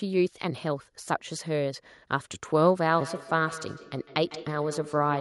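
From 2.89 s to the end, the speech carries a feedback echo between two devices: a second device replays this microphone's signal, which is recaptured and missed by the echo canceller. Each sound returns at roughly 150 ms intervals, peaking about 15 dB below the speech. A spectrogram shows fainter, evenly spaced copies trailing each syllable.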